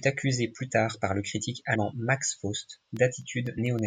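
At 1.74 s the speech jumps forward with a brief smeared blip rather than a hard click: compressed frames skipped. Around 70 ms of audio goes missing, which fits roughly three lost frames of about 26 ms each, dropped from the file or rejected by the decoder as damaged, with the overlap between neighbouring frames blurring the join.

From 2.59 s to 3.79 s a regular tick sounds every 0.125 s, about ten in all, audible only while there is speech. These are periodic USB or driver dropouts: a background task stalls the bus or driver at a fixed interval, and each time a fraction of a millisecond of audio is replaced by silence.

At 3.57 s, inside that run of ticks, another smeared skip appears. This is the same compressed-frame loss, shorter this time, at about 50 ms, which points to roughly two missing frames.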